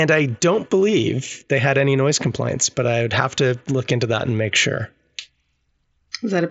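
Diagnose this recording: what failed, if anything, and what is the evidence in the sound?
Nothing failed in this speech recording, and the lack of content above about 7.7 kHz is simply the normal band limit of the mSBC Bluetooth headset link it passed through.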